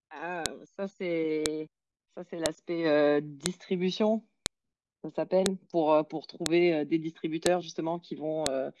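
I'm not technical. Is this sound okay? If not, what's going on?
No. There is a sharp click about once every second, from 0.46 s to 8.46 s. This is a file header played as audio. The speech was joined from one-second pieces. Each piece's start-of-file data was left in and plays as a snap.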